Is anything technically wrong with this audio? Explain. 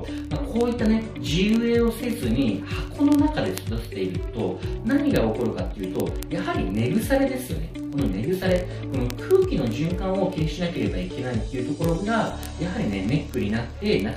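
Yes. From 0.11 s to 14.16 s, sharp ticks of uneven strength repeat about every 20 ms: word clock ticks from an unlocked receiver clock roughly 0.1% off, slipping one sample each time.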